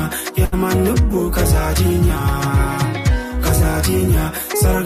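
A block size mismatch (truncated) runs through the whole clip: block ends are discarded, giving a steady 100 Hz buzz with no audible speed change, seen as regular vertical seams in the waveform and spectrogram. At 0.45 to 0.54 s, a short stall from a late packet holds the sound for about 70 ms with nothing lost. It shows as a smeared, frozen stretch in the spectrogram, and everything after it arrives 70 ms later.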